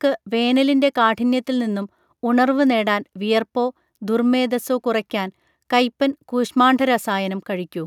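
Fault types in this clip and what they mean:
No technical faults can be heard in this speech recording, and the signal stays continuous and stable throughout.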